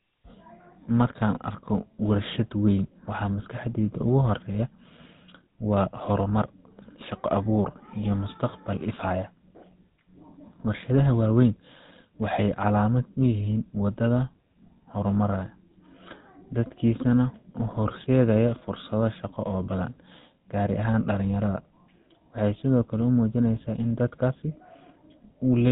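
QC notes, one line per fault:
Throughout: GSM full-rate codec, a buzzy, gravelly roughness with nothing above 4 kHz, from pulse-driven vocal-tract modelling at a rate that fits 13 kbps.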